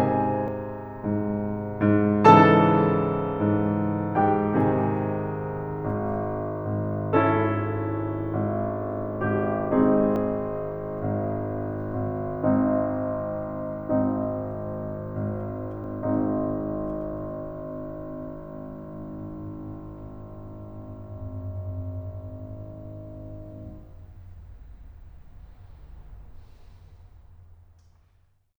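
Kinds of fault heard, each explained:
Dropped buffer (overrun): the music jumps abruptly forward at 0.48, 10.16 and 15.84 seconds. There is no gap of silence, just a sudden splice where a slice of the music is missing, roughly 70 ms at the first and third points and about 20 ms at the second. The likely cause is the recording software failing to collect its samples in time, so the hardware overwrote that block and the two sides were joined directly.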